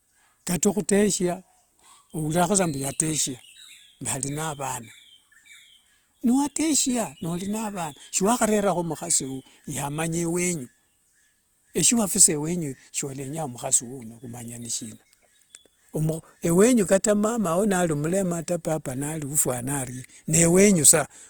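Throughout, the speech carries audible Opus compression, likely from a rate near 24 kbps. Bandwidth reaches about 20 kHz, yet it sounds grainy and rough.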